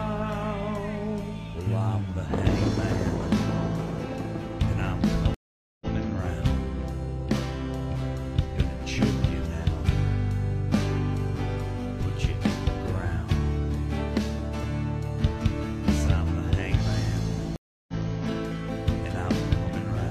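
Two stream reconnects, where the connection dropped and a fresh decoder restarted mid-stream. At 5.34 s there is 467 ms of silence, then the audio repeats from 93 ms earlier. At 17.56 s a 321 ms gap skips ahead about 0.3 s. Each shows as a flat waveform gap and blank spectrogram column, followed by a brief fade-in.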